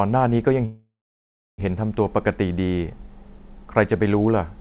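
Speech carried over a call line, with nothing above 4 kHz, which fits G.711 narrowband coding. A call audio freeze runs from 0.65 to 1.61 s. The last sound carries on as a fading buzz or hiss, then about 0.69 s of silence. The speech then resumes where it stopped, with nothing lost. The likely cause is packets held up in transit, emptying the jitter buffer.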